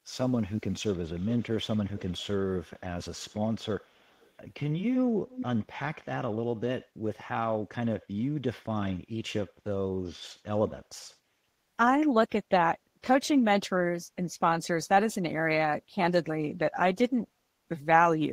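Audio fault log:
0.29–0.73 s, 1.18–1.44 s, 1.94–2.26 s, 3.80–4.33 s and 5.28–5.46 s, echo leak: a delayed copy of the speech trails the original by 319 ms each time, barely audible at first, clearest near 5.3 s, likely because a far-end echo canceller let loudspeaker pickup through. Unlike room reverberation, which smears sound continuously, this is a distinct, fixed-delay repeat that comes and goes in scraps.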